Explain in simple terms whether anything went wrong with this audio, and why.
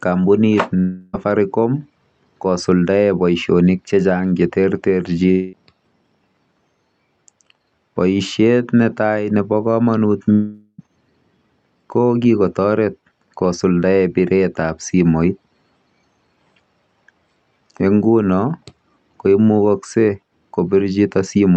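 Three gaps break up the speech, at 0.79 to 1.15 s, 5.31 to 5.55 s, and 10.33 to 10.80 s, the last just after "ne tai nepo kamanut". Each is likely a long network dropout: audio stopped arriving, so the receiver stretched the last sound into a fading buzz. The final gap ends in a brief moment of silence. When the speech resumes, about a fifth to half a second of it is simply missing.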